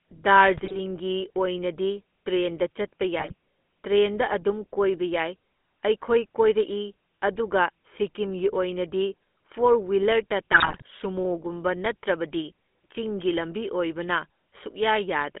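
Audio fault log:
throughout, GSM full-rate codec: The speech has the gritty, buzzy texture of GSM full-rate coding at 13 kbps. The vocal tract is modelled and excited by sparse regular pulses, which roughens the voice audibly, and the band is limited to about 200 Hz to 3.4 kHz.
0.56–0.77 s, 3.19–3.33 s, 10.52–10.88 s, GSM bit errors: Three bursts of squawks, pops and gargling. Corrupted filter, pitch and gain parameters distort the spectrum and level frame by frame. The longest burst, at 10.5 s, fits a bit error rate near 4 percent, and the first two fit about 3 percent.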